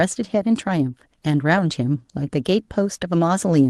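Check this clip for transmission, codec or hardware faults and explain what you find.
Nothing here points to a transmission, codec or hardware fault; the speech comes across as you'd expect from a call running Opus at about 24 kbps with its top end stopping near 12 kHz.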